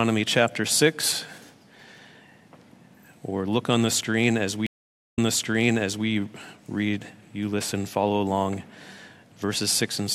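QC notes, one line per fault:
4.66–6.07 s, stream reconnect: the audio drops to about 0.49 s of silence as the connection breaks, then a fresh decoder restarts mid-stream from a resent burst, so playback resumes about 0.91 s earlier and that stretch of sound is heard twice.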